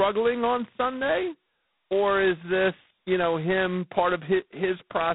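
G.726 ADPCM damage runs through the whole speech clip. The line band spans roughly 150 Hz to 3.7 kHz, with nothing above 3.9 kHz. Too few bits per sample leave a harsh, rasping hiss that rises and falls with the speech, which fits 16 kbit/s.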